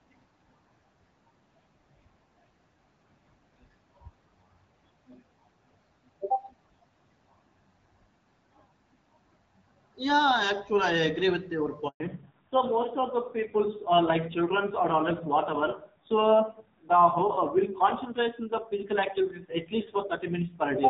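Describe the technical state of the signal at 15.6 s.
At 15.6 s the call is in a fallback to narrowband, from 12.0 s after "with your" to the end. Nothing remains above 4 kHz, so a spectrogram shows a flat ceiling there. The audio sounds duller and rougher, which fits a low-rate AMR narrowband codec.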